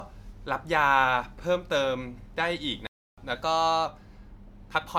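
Right through the speech there's a swirly, hollow smear, with consonant attacks blurred and nothing above 19.9 kHz. That's generation loss, likely from about five rounds of MP3 encoding near 128 kbit/s, each pass requantising on a shifted frame grid so the noise and spectral holes stack up.

At 2.87 s the sound just drops out until 3.18 s, roughly 306 ms of silence, then carries on. That's a playback stall: the player was likely starved of data or its thread got blocked, so output went quiet until it caught up.

From 3.35 to 3.86 s the speech suddenly runs about 6.1% fast and sits about 102 cents sharp, roughly a semitone, before snapping back. That's a drift correction step, likely clock-matching software jumping the playback rate to rebalance its buffer.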